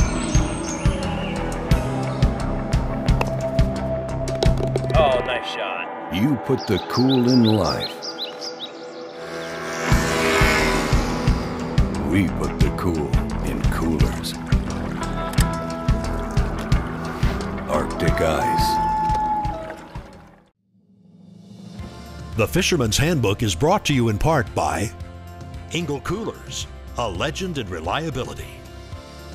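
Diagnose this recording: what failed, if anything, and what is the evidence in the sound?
Nothing failed, and there is no evidence in the sound of any fault.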